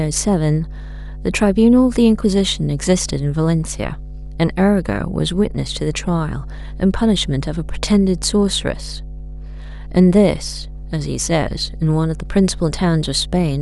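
A steady low drone sits under the speech for the whole clip, fairly prominent: mains hum at 50 Hz, roughly 15 dB below the speech, from a ground loop or nearby transformer.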